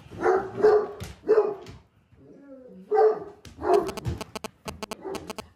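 A nearby 2G handset is exchanging short signalling bursts with its network, and the audio circuitry rectifies that radio energy into the signal path. The result is GSM signalling bursts from 3.74 s to 5.40 s: a galloping dit-dit-dit of short buzzes pulsing at about 217 Hz. They sit only a few decibels below the wanted sound.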